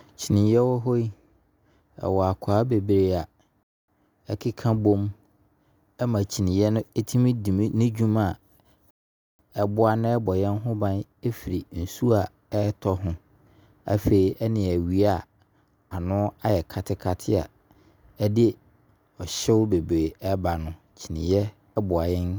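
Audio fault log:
3.63 to 3.88 s and 8.91 to 9.39 s, rebuffering stall: the speech drops to silence for 0.25 s, then 0.48 s, and picks up exactly where it left off. The player ran dry of downloaded audio and waited, so nothing's missing, just time added.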